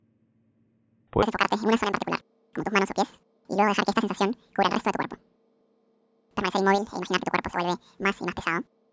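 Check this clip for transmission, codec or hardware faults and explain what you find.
One fault is present: a wrong sample rate. From 1.23 s to the end, the speech runs twice as fast and an octave high, 12 semitones up. The samples are played at double their recorded rate, with no conversion, which fits 8 kHz audio played at 16 kHz.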